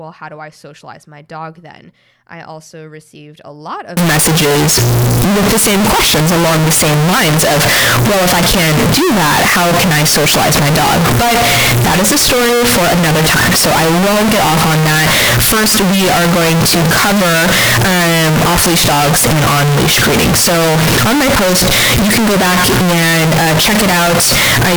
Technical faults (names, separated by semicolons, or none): float read as integer